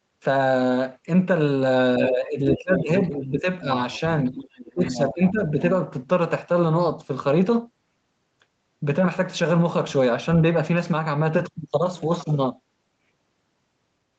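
Around 1.99 to 2.9 s the talker gets pushed down, by about 15 dB at the worst point, with roughly 0.7 s of that stretch audibly dipping and thinning. That's speech suppressed in double talk. Both ends were talking at once, and the echo canceller likely couldn't tell the local talker apart from the loudspeaker echo, so it clamped everything. Inside that dip you can catch the other side's voice leaking through, in short scraps at 2.49 to 2.57 s (about 5 dB under the talker) and 2.76 to 2.83 s (about 10 dB under). Another faint scrap follows at 3.0 to 3.05 s, about 15 dB down. Those are pieces of the far-end voice coming back off the speaker that the canceller likely didn't fully scrub out of the mic. Right after, from 3.1 to 3.47 s, there's a milder suppression of about 5 dB. The longest leak runs from 4.28 to 5.09 s, sitting about 10 dB below the talker. Overlapping it, from 4.74 to 5.59 s, the talker gets ducked again by up to about 15 dB for around half a second, the same double-talk clamp as before.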